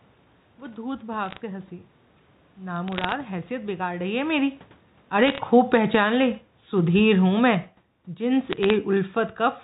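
Short bursts of sharp ticks and crackle sit over the speech from 1.23 to 1.37 s and again from 2.88 to 3.12 s, 5.27 to 5.39 s and 8.51 to 8.74 s. These are bit errors on a digital phone line. At a rate of a fraction of a percent, single bits in the G.711 stream were flipped. Each flip corrupts one sample, and hits on the sign or upper bits leave the loudest clicks while the speech between them stays intact.

From 3.98 s to the end at about 9.6 s, the level sinks steadily, and the room background drops along with the speech. This is automatic gain falling. The gain control judged the input too hot and pulled its gain down gradually, by about 11 dB in total. At around 4.0 s the talker also shifts position at the microphone, which changes the voice level alone rather than the whole sound.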